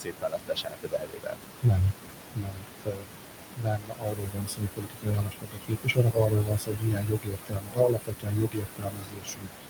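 Noise suppressor artifacts run through the whole clip. The suppressor pulls down the bands it judges to be steady noise by about 21 dB, so the background sinks and swells around the speech. On a spectrogram this shows as a patchy, blotchy noise floor.

Speech cut by the noise suppressor begins right away, from 0.0 to 1.42 s, with drops of about 22 dB covering roughly one and a half seconds. Shorter cuts follow at 1.62 to 1.93 s (about 17 dB, roughly a tenth of a second) and 2.33 to 3.08 s (about 22 dB). From 3.56 s to the end the cuts return at up to about 22 dB. Soft consonants and word endings sound swallowed. The waveform shows dips in the speech envelope, and the spectrogram shows speech energy gated away with the noise.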